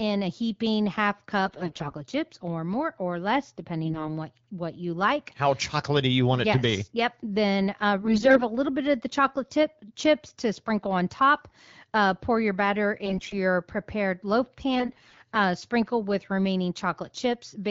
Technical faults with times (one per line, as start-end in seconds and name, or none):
1.46-1.94 AMR bit errors
3.84-4.17 AMR bit errors
8.02-8.43 AMR bit errors
13.05-13.34 AMR bit errors
14.75-15.20 AMR bit errors